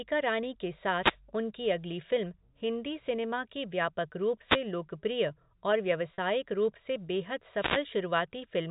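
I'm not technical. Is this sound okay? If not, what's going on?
No. Wireless microphone noise hits come at 0.97 to 1.18 s, 4.46 to 4.61 s and 7.55 to 7.85 s. Each time, the microphone's radio signal briefly fades as reflected copies cancel it, and the receiver's own hiss rises into a short burst of static over the voice.

Packet loss with pitch repetition occurs at 6.14 to 6.18 s. About 40 ms of audio went missing, which fits two lost packets. The receiver filled the gap by repeating the last bit of voice, so it sounds like a brief buzzy hold.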